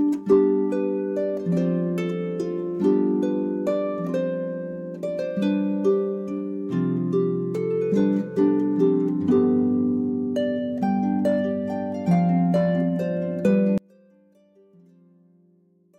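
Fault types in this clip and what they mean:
one channel inverted: From 13.78 s to the end at 15.98 s, the sound collapses when the two channels are heard together in mono. Its level drops by about 34 dB, leaving only a faint residue. The likely cause is reversed polarity on one stereo channel. Anything common to both sides then cancels in the sum. What survives is only the small difference between the left and right channels.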